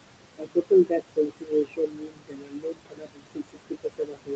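Noise suppressor artifacts run throughout the clip. The suppressor pulls down the room noise, which sits only about 11 dB below the speech, by about 21 dB in the gaps, so the background pumps up under each phrase and sinks between them.

Speech cut by the noise suppressor begins at 0.38 s and lasts to the end. Mistaking parts of the speech for noise, the suppressor turns them down by as much as about 22 dB, so those parts sound swallowed and faint.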